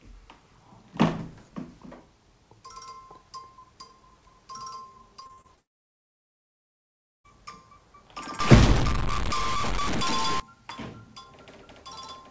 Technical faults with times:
5.20-5.59 repeated packet loss (robotic sound)
5.59-7.26 long network dropout
8.40-10.40 stuck bit

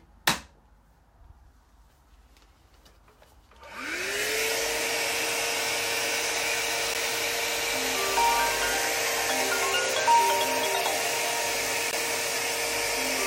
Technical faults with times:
6.94 block of digital silence
11.91 block of digital silence

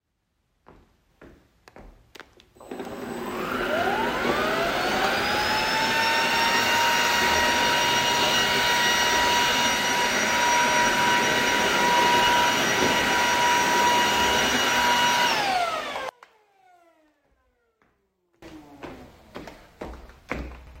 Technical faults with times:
16.09-18.42 one channel inverted

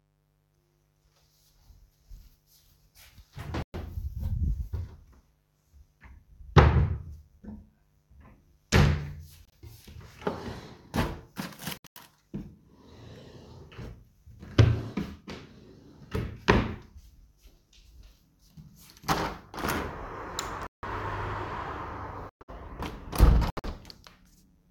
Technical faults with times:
0.00-24.70 mains buzz
3.62-3.75 corrupt frame muted
9.45-9.53 corrupt frame muted
11.77-11.98 corrupt frame muted
20.67-20.84 corrupt frame muted
22.29-22.50 corrupt frame muted
23.50-23.65 corrupt frame muted

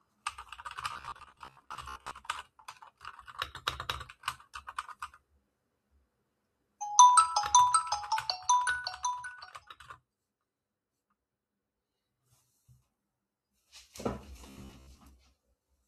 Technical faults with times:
0.93-2.14 robotic sound from repeated short buffers
14.47-14.98 robotic sound from repeated short buffers

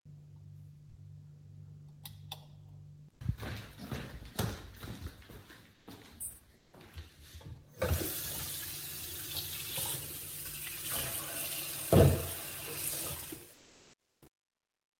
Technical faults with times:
0.89-0.95 sound dropped by the voice detector
5.73-5.87 sound dropped by the voice detector
6.55-6.73 sound dropped by the voice detector
13.13-15.00 truncation distortion on a fade
13.53-14.21 sound dropped by the voice detector

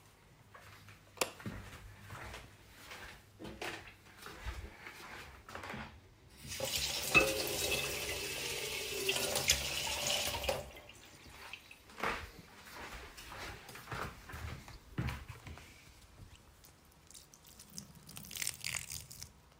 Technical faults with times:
none

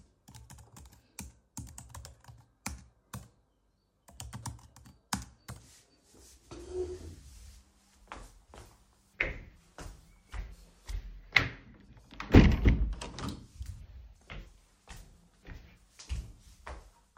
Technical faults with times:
none

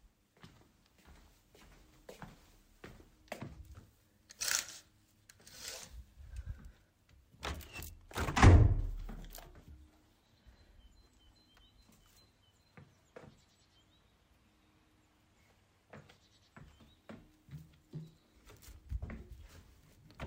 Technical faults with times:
none

